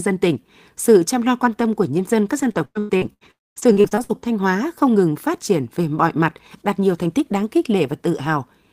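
After "của nhân dân các", from 2.41 to 4.28 s the speech turns choppy, repeated packet loss chopping out pieces, the longest 101 ms, with about 29% patched by stretched sound. Inside it, from 3.31 to 3.58 s, a brief buzz or hiss collapses into 230 ms of silence, likely a long network dropout.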